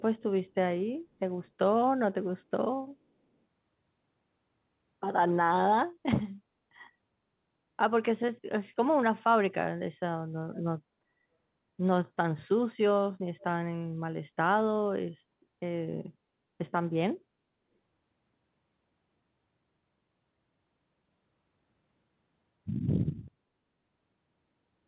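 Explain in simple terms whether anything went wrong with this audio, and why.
Two short bits of echo leak stand out, at 10.53 to 10.61 s and again at 13.39 to 13.44 s. Each time you hear a faint, brief copy of the speech trailing the original by about 0.4 s. That's most likely the far end playing the call through a loudspeaker, with its echo canceller letting a little of that sound slip back into the microphone. The phone-like dullness, with nothing above 4 kHz, just comes from the call codec.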